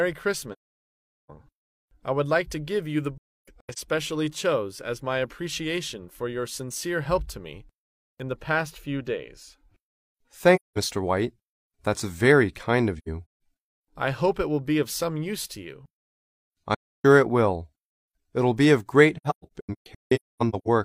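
AAC frame loss with muting leaves soft-edged silent holes at 0.52–1.30 s, 3.18–3.78 s, 10.55–10.78 s, 12.98–13.41 s, 16.74–17.05 s and 19.17–20.67 s. The decoder zeroes the missing frames, so overlapping windows fade the sound out and back in. That distinguishes them from hard-cut dropouts. The 3.18 s, 12.98 s and 19.17 s holes are broken into several shorter gaps.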